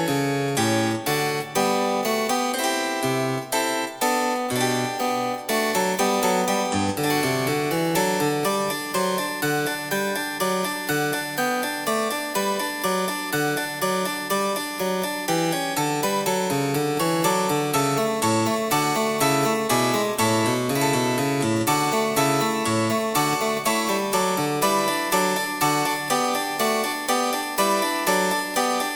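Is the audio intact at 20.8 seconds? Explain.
Yes, the audio is intact at 20.8 seconds, with no dropout, click, distortion or other fault to be heard at that moment.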